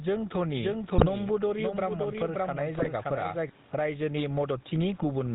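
Gain pumping runs through the whole clip, with a swing of about 10 dB, so loud and soft passages sit squashed close together. The likely cause is input gain set far too high with a fast limiter clamping each peak. The room noise itself stays about 39 dB below the speech; it is the pumping, not the noise, that marks the fault.

The GSM full-rate codec also colours everything. Nothing survives above 4 kHz, and the speech carries that buzzy, gravelly grain that comes from driving a vocal-tract model with sparse, regularly spaced pulses. The damage is plainly audible and fits the 13 kbps full-rate coder. The gravelly pulse texture, rather than just a muffled band limit, sets it apart from cleaner narrowband coders.

From 0.57 s to 3.49 s there is a doubled audio track. A full-band second copy trails about half a second behind and about 5 dB quieter, likely from a slower second capture path or a misaligned edit. 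It is not an echo or reverb tail. The copy has no decay and no added room colour, and it switches in and out abruptly at both ends.

GSM bit errors strike at 0.94 to 1.04 s, 2.78 to 2.88 s and 4.97 to 5.05 s. Each lasts roughly a tenth of a second across a few frames. Corrupted filter, pitch and gain values bend the spectrum and spike the level, so the speech breaks into squawks, pops and gargling. The first two bursts carry a heavier error rate, about 2.4% and 2.3% against 0.85% for the last. Unlike packet loss, these bursts produce garbled noise instead of gaps or smoothed-over silence.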